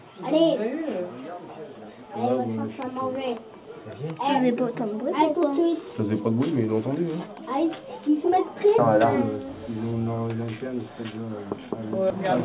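No technical faults can be heard anywhere in this recording; the signal stays steady and intact throughout.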